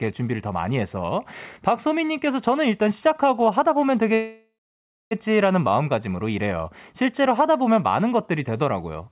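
Packets in this speech call were likely held up in transit, emptying the jitter buffer and causing a call audio freeze from 4.14 to 5.13 s. The receiver stretched the last sound into a fading buzz or hiss and then about 0.6 s of silence before the speech resumed exactly where it stopped. Nothing was lost, but everything after the freeze runs roughly 1 s late, heard over a narrowband call path with nothing above 4 kHz.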